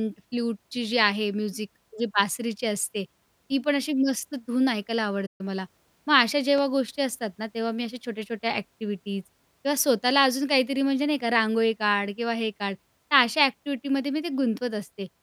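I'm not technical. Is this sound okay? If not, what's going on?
No. At 5.26 s the speech cuts out to silence for about 0.13 s and then picks up again at 5.41 s. That is a playback stall: the player most likely ran short of audio data or was briefly held up, so nothing came out until it caught up.

Then, from 6.58 to 6.60 s, a single sharp pop sits on top of the speech, a bit louder than the voice itself, while the talking carries on underneath. That is a loud pop, likely a sudden electrical jolt from a switch, plug or driver hiccup.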